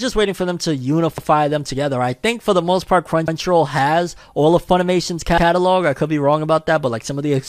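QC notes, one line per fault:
1.18–1.28 s, 3.28–3.38 s, 5.38–5.48 s: overlapping chunks. Each 2.0 s chunk restarts 100 ms before the previous one ended, so that slice plays twice and causes a stutter after "waiting for them to", after "for the most part", and before "I could be wrong".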